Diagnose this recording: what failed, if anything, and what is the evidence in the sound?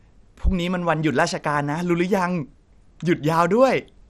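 The codec stage is the culprit here, and it's there for the whole clip. The speech sounds dull, with a gurgling, grainy edge, and there's nothing at all above 14.1 kHz. That's likely MP2 compression at a low rate, something like 64 kbps. Layer II divides the spectrum into 32 sub-bands and rations bits among them. Starved of bits, it shuts the top bands off and coarsely quantises the rest, which produces that granular churn.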